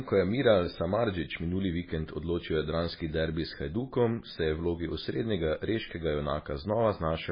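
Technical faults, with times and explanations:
Throughout, MP3 compression: the speech sounds heavily watery and swirly, with nothing above 5 kHz and metallic, chirpy s sounds. This likely comes from a starved MP3 encode, fitting about 16 kbps, that cuts treble at a fixed point and drops weak lines, which flicker between frames.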